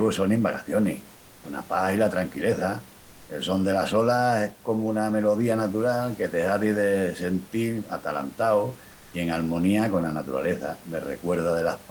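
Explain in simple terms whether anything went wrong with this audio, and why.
Yes, briefly: the sender likely paused sending during a gap at 1.19 to 1.43 s, so comfort noise in place of the background filled it with flat, featureless hiss.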